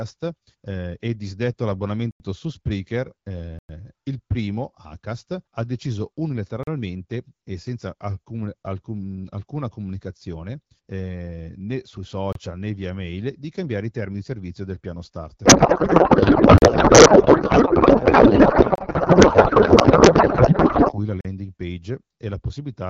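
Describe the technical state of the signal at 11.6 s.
At 11.6 s the speech is intact, carried cleanly by the AMR wideband (HD Voice) codec with no fault at that point.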